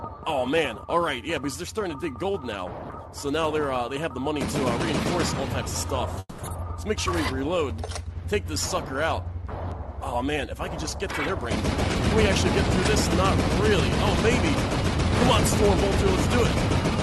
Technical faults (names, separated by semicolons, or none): call audio freeze; jitter buffer speed-up